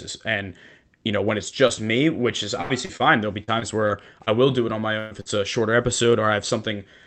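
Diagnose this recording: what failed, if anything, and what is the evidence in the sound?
The network stage failed, and the speech shows short concealed packet loss three times: at 1.67 to 1.71 s, 2.85 to 2.91 s and 2.97 to 3.02 s. Each hole lasts about 20 to 40 ms. The decoder extended the last sound for 19, 35 and 29 ms, then blended back. Listen for a brief smear or wobble at each point. A short consonant can disappear there.

The same network fault causes three bursts of packet loss. They fall at 2.61 to 2.71 s, 4.99 to 5.13 s and 5.21 to 5.27 s. Those gaps lose 80, 120 and 40 ms of audio. The concealment holds the last sound for 81, 119 and 48 ms and fades it. Voiced sounds become a held buzz. Others become a fading hiss. The speech then resumes with the middle missing.

Repeated packet loss, or robotic sound, runs from 3.44 to 4.29 s. Four separate gaps fall in that stretch, about 100 ms lost in total. 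The longest gap is 39 ms. About 11 percent of the span is patched audio. Each patch continues the last sound, and another hole follows soon after. The result is choppy speech with pieces missing. The Opus call path underneath keeps its normal 8 kHz band limit.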